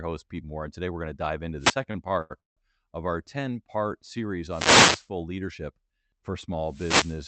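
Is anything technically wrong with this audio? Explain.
Yes. The analogue radio link of a wireless microphone faded as reflected signals cancelled, so receiver noise rose and broke through as short bursts of static and swish. This wireless microphone noise hit occurs at 1.58 to 1.78 s, just after "dive into"; at 4.47 to 5.09 s; and at 6.64 to 7.27 s, just after "leadership for".

Packets arrived late, so the jitter buffer emptied four times and the receiver stretched the last sound to fill about 293 ms, with the longest wait 166 ms. Nothing is lost, but the audio drags and stutters in these repeated stalls (stutter) from 1.91 to 2.59 s, just before "of our". The call path beneath this, an Opus codec limited to 8 kHz bandwidth, is working as expected.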